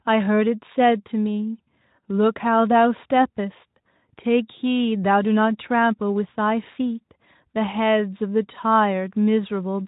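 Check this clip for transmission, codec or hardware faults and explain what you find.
No transmission, codec or hardware faults turn up in this speech; the audio is band-limited to nothing above about 3.8 kHz, as expected from the narrowband Speex coding it passed through, and that coding leaves only light traces.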